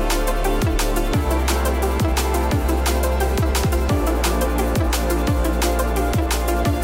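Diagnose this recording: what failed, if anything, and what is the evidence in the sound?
Nothing failed: no stage in the chain, from capture through playback, leaves any audible evidence of a fault anywhere in the recording.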